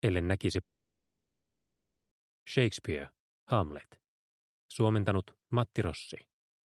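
At 0.61 s the sound cuts out and stays gone until 2.13 s, a gap of about 1.5 s. What marks this as a long network dropout rather than a brief packet-loss glitch is that the receiver's concealment gives up almost immediately, leaving about 1.49 s of plain silence instead of a fading buzz. The audio resumes later in the stream rather than picking up where it stopped, likely because that stretch never arrived.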